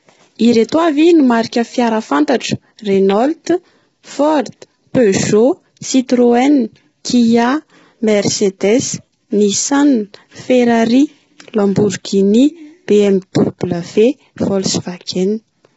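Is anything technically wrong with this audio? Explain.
Yes. Throughout, the speech sounds rough and grainy, with noise filling the gaps between harmonics and nothing above 7.8 kHz. That's likely low-delay AAC compression: AAC-ELD's short frames smear pitch detail, and heavy damage like this points to roughly 16 kbps.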